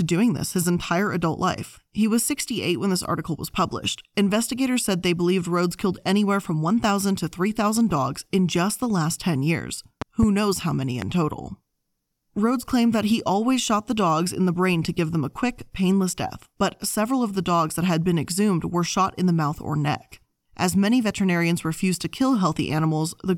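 A loud pop, sharply above the speech, sounds twice at 10.02–10.26 s before "knows how many", then once at 11.02–11.05 s, likely from stray voltage spikes.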